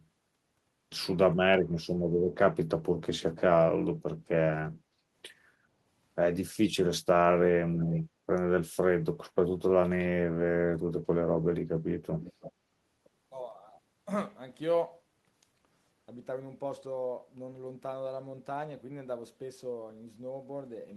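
At 4.83 s the background is gated by the echo canceller. The room tone sinks by about 6 dB and stays low until 5.1 s, roughly a third of a second in all, before returning. The canceller turned the microphone down hard while the loudspeaker was playing. Unlike a network dropout, the sound never goes fully silent. Only the ambient floor ducks, then recovers once the canceller releases.

From 12.22 s to 12.52 s a faint, delayed copy of the speech appears, trailing the original by 323 ms at about 20 dB below it. This is an echo leak, likely from a speakerphone whose echo canceller failed to remove all of the loudspeaker sound picked up by its microphone, sending that residue back. What separates it from room reverberation is the single distinct repeat at a fixed lag, rather than a smeared decay that fades continuously from the direct sound.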